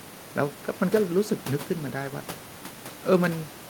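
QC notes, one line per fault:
No technical faults are present in the signal, and the room's background noise, part of the original recording, sits about 19 dB below the speech.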